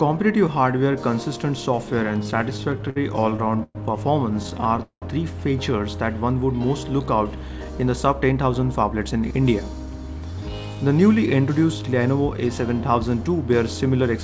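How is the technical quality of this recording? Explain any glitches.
The recording has two stretches of stutter and one hurried passage. It also carries the band limit of a G.722 call codec, with nothing above 8 kHz.

Repeated stalls (stutter) occur from 2.24 to 3.77 s and from 4.43 to 5.04 s. Packets arrived late, so the jitter buffer kept running dry. The receiver stretched the last sound through each gap: 330 ms across 22% of the first span, and 248 ms across 41% of the second, with the longest stall lasting 190 ms. Nothing is lost, but the audio drags and stutters.

A jitter buffer speed-up runs from 7.49 to 9.34 s. After the stalls, the buffer held surplus audio. The receiver trimmed short pitch-period slices repeatedly, removing roughly a fifth of a second. The passage plays at 111% speed with unchanged pitch and sounds noticeably rushed.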